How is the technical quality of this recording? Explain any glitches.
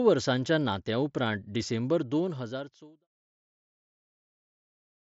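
No glitches or technical faults can be heard here.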